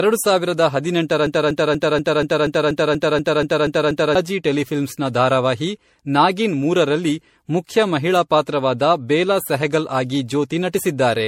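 Generation loss runs through the whole speech clip. It sounds swirly, smeared and hollow, with blurred attacks and nothing above 16.5 kHz. The likely cause is repeated MP3 encoding at 64 kbit/s, around seven passes, each quantising on a shifted frame grid so that noise and spectral holes pile up.

A broken-record loop runs from 1.27 to 4.15 s, right after "ಸಾವಿರದ ಹದಿನೆಂಟರ". A 240 ms fragment repeats exactly, back to back, twelve times, and speech resumes at "ಟೆಲಿಫಿಲ್ಮ್ಸ್ನ ಧಾರಾವಾಹಿ ನಾಗಿನ್ ಮೂರರಲ್ಲಿ". This likely comes from a stalled player or stream resending its last buffered piece, so the audio meant for that span is lost.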